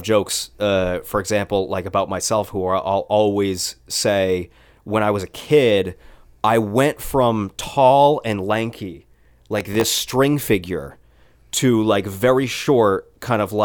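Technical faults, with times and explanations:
9.59–10.01 s, processor overload crackle: after "from tall and lanky", about fifteen missed deadlines on very short buffers, near 1.5 ms, replay stale audio with hard edges, giving gritty crackle until "figure to like very".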